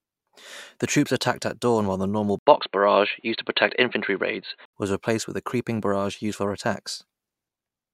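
An input switched to a poorer device is the likely cause at 2.39 to 4.73 s. After "dawn while the normal" comes an 80 ms gap, then the speech turns dull and boxy, with nothing above 4.3 kHz, faint new background noise and a level shift of roughly 5 dB, until "was replaced with a".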